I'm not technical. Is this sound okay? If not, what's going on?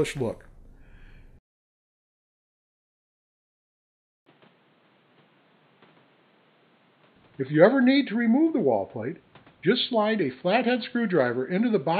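No. At 4.24 s there's a tiny gap, then the sound turns dull, with new background hiss, until the end: likely an input switched to a poorer device.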